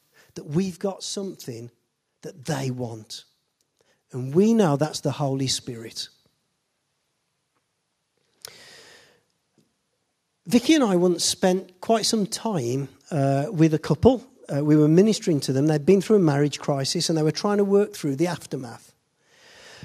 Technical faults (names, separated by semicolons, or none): microphone volume stepped up